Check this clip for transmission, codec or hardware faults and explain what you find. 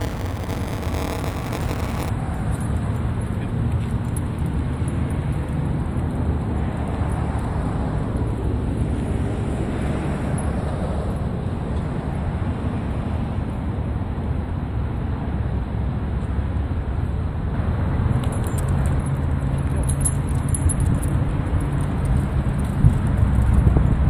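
There's one fault, right at the top. From 0 to 2.10 s you get buffer tearing: writer and hardware reader have slipped, so a small slice of each buffer replays audio roughly 20 ms old, hard-spliced in. That gives a robotic 188 Hz buzz, which fits a 256-sample buffer.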